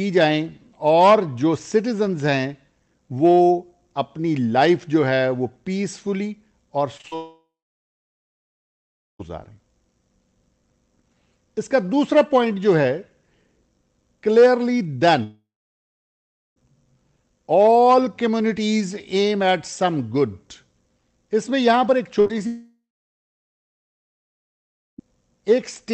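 Brief smears and wobbles come at 6.97, 7.01 and 7.07 s. These are short concealed packet losses: 20 to 40 ms of audio never arrived, and the receiver papered over each gap by continuing the last sound. Right after, from 7.15 to 9.21 s, a fading buzz or hiss gives way to about 1.7 s of silence before the sound resumes with about 2 s missing. The same thing happens from 15.23 to 16.58 s, with about 1.1 s of silence, and from 22.47 to 25.00 s, with about 2.2 s of silence. Each of these is likely a long network dropout, where no audio reached the receiver, so its stand-in sound faded to nothing. Between those last two, from 22.20 to 22.39 s, the sound turns into a briefly held, fading buzz or hiss and then jumps ahead. That is a burst of packet loss, about 60 ms gone in a row, with a further short concealed gap at 22.27 s.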